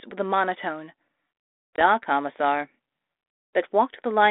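At 1.76 s the speech drops into a hard-edged silent hole, and when it resumes around 1.81 s it comes back with brief, slight distortion that settles within tens of milliseconds. This is packet loss on an ADPCM call. About 20 ms, roughly a single packet, went missing from the 32 kbit/s G.726 stream, band-limited to 300 Hz to 3.6 kHz. The decoder's adaptive predictor and step size drifted from the sender's until they resynchronised.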